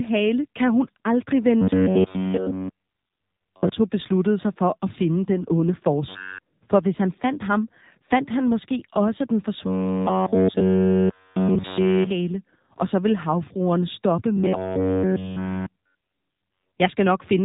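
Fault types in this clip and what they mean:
AMR narrowband mobile codec: The speech was coded by the narrowband mobile codec at 7.4 kbps, which fits a mid-to-low AMR-NB mode. Nothing above about 3.8 kHz survives, so the speech sounds boxed-in and telephone-like, with plainly audible buzzy, synthetic coding damage throughout.
Robotic sound from repeated short buffers: The likely cause is audio arriving too seldom, with the player looping the last fragment of about 10.7 ms. This imposes a rigid 93.8 Hz metallic buzz, with essentially everything repeated, after "at finde den onde", "han måske også den" and "så ville havfruerne stoppe".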